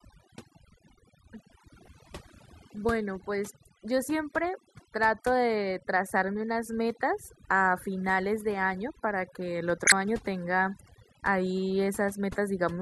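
Throughout the speech, the background drops and breaks up into twinkling specks. This is overdone noise removal: an over-aggressive reducer shut down frequency bands near its noise estimate, taking quieter parts of the voice with them.

At 1.81 to 1.88 s a short glitch breaks through, peaking around −15 dBFS, and at 9.85 to 9.92 s a louder glitch reaches about −10 dBFS. Each is a corrupt frame decoded: damaged compressed frames, a few and then several, were played anyway, scattering energy into the wrong frequencies.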